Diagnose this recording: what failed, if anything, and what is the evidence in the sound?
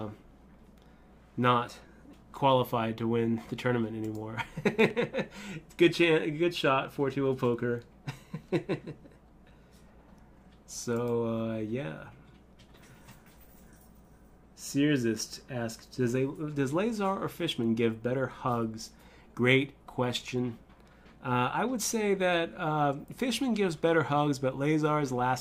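Loud pop at 4.80 to 4.93 s: two sharp thumps a few decibels above the sound, which carries on underneath. The likely stage is analogue wiring, where a sudden voltage step from a plug, switch or static discharge entered the path and was shaped into pulses.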